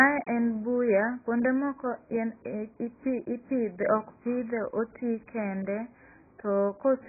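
Speech clip with heavy AAC compression damage throughout: nothing above 2.5 kHz, a dull, smeared tone and warbling sibilants, likely from AAC-LC at a very low bitrate.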